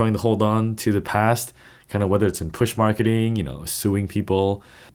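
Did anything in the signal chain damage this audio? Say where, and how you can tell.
Yes. A call bitrate drop, network to codec, from 1.94 to 3.47 s after "on to the past" makes the sound coarse and muffled, fitting a fall from 32 to 17 kbps.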